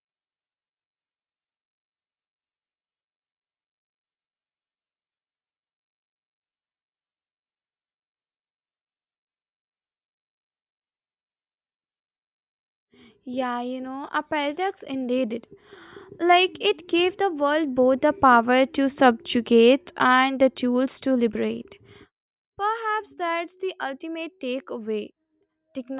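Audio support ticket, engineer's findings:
No technical faults found in the speech signal: level, continuity and timing hold steady across the recording, with no audible defects to attribute to any component.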